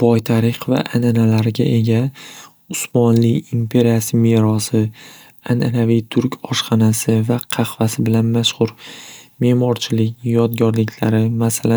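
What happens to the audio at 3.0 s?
Nothing goes wrong at 3.0 s; the speech runs through that moment intact, with no dropout, click or distortion.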